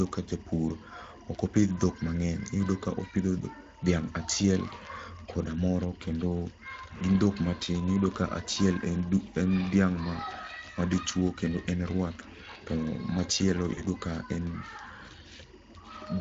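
It's a speech clip, and behind it the whole way through there's a faint chirpy warble: timecode bleed. Linear timecode is leaking in from a neighbouring track or cable, flipping between roughly 1 and 2 kHz and sitting around 30 dB under the speech. Its rhythm fits 24 fps code. The speech itself has that hoarse, slightly noisy Speex codec sound, plainly audible. The damage points to a middling setting somewhere around 20 kbps. Right after "to machielo", from 13.73 to 13.82 s, there's VoIP packet loss concealed by the speech codec. About 40 ms went missing, which fits a couple of lost packets. The decoder stretched the last pitch and filter into a fading sound, and the speech stays weak or distorted as it recovers.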